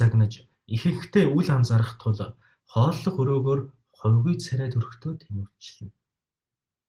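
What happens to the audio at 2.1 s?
Nothing goes wrong at 2.1 s; the speech continues intact through that moment, with the Opus voice compression working normally.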